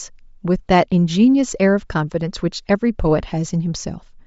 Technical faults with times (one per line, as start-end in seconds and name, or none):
0.00-4.26 Bluetooth LC3 compression